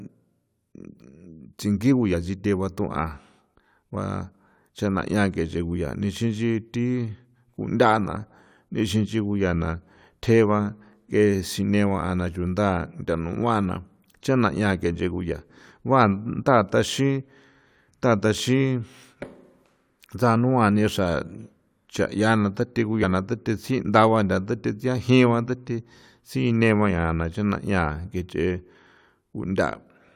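Compressed frames skipped at 23.02 s in this speech recording: roughly 50 ms of audio goes missing as whole frames drop out, so the audio jumps ahead at the join.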